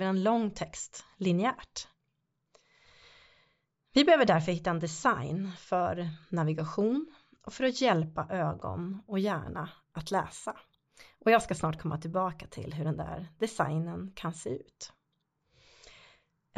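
This is speech. From 8.64 to 14.48 s, after "och för att hjälpa", there is imaging from linear upsampling. The top end sounds dulled, and a faint metallic shimmer sits on sibilants. A weak spectral mirror appears between 8 and 16 kHz, roughly 30 dB down. This fits audio at a 16 kHz rate raised to 44.1 kHz by straight-line interpolation.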